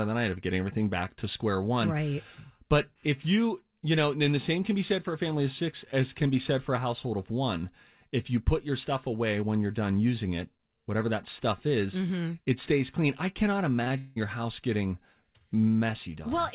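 Short concealed packet loss occurs twice in a row, at 13.84 to 13.88 s and 13.88 to 13.92 s, just after "stays clean I cannot". About 20 ms went missing each time, and the receiver carried the preceding sound forward to bridge it. It is heard as a brief smeared wobble.

A long network dropout follows from 13.98 to 14.18 s, likely caused by about 180 ms of audio failing to arrive. The gap is filled almost entirely with a continued, fading buzz or hiss rather than silence. The speech resumes at "house getting" with that stretch lost. Throughout, the narrowband call path leaves nothing above 4 kHz.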